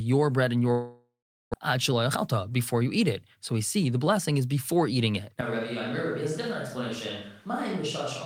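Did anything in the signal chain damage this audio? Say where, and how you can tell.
Yes. Right after "bread and", from 0.71 to 1.56 s, there's a long network dropout, so this is a network-stage problem, likely packet loss on the receive side. The last sound gets stretched into a fading buzz, then drops to about 0.41 s of silence before the audio comes back. When it resumes, roughly 0.6 s of material is just gone, and the playout delay has grown by something like a fifth of a second.

From 1.77 to 4.13 s, ending just before "is before eating it", you get a jitter buffer speed-up. After the dropout the buffer is holding too much, so the receiver trims out tiny pitch-period-sized slices over and over to catch up. The result plays at about 108% speed with the pitch unchanged, so it sounds a bit rushed. Over that stretch it sheds roughly 200 ms.

After "is before eating it", at 5.41 s and running to the end, there's a switch to a distant microphone, most likely a capture-stage fallback when the close mic dropped out. 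The change is sudden: the sound goes roomy and hollow, loses bass, and sits about 5 dB lower. Room noise comes up to roughly 30 dB below the speech, which is what you'd expect from a mic placed well back from the source.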